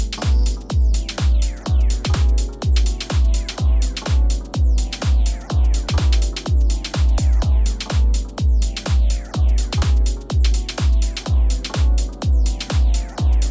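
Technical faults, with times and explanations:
No technical faults can be heard anywhere in the signal; it stays steady and intact across the whole clip.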